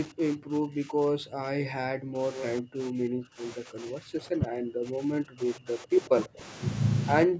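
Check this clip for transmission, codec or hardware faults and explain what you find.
Two call-path faults stand out, both tied to an echo canceller, alongside the normal call microphone processing that leaves nothing above 8 kHz.

Speech suppressed in double talk occurs from 0.07 to 2.35 s, 2.6 to 6.44 s, and 7.25 s to the end, likely because the far side talked simultaneously and the canceller ducked both. The speech dips and breaks up, dropping by roughly 40 dB at worst. On a waveform this shows as collapsed envelope stretches, and on a spectrogram as dark gaps.

An echo leak sits between 2.34 and 2.45 s: a faint copy of the speech, about 10 dB below it, trailing by 147 ms, likely residual loudspeaker echo the canceller missed. On a spectrogram it appears as a fainter, shifted repeat of the preceding harmonic pattern.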